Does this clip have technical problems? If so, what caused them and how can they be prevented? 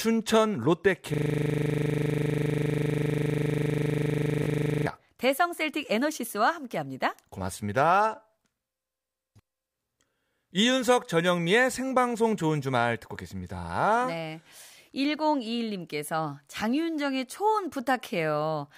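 Yes. A system hang loop runs from 1.14 to 4.87 s: a 40 ms slice of the speech repeats exactly, about 90 times, producing a 25 Hz buzz. The host froze while the audio hardware kept replaying one ring buffer. Prevent it with stable drivers and watchdog muting on stalls.

A Bluetooth stutter occurs from 4.43 to 4.45 s, inside the loop. A slice of about 20 ms repeats once, consistent with a single lost or late packet that the receiver covered by replaying its last buffer. Reducing radio interference and distance prevents it.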